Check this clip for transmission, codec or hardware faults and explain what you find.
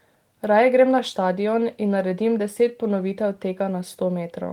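No faults found in this clip.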